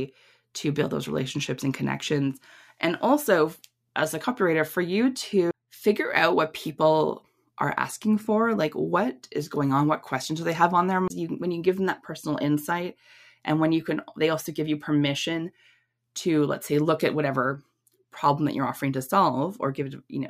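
CD skips at 5.51 to 5.54 s, after "a copywriter for you", and 11.08 to 11.10 s, after "they have on their", interrupt this speech: the laser jumped tracks, briefly muting for a few tens of milliseconds, so a short gap sounds and the speech resumes elsewhere on the disc.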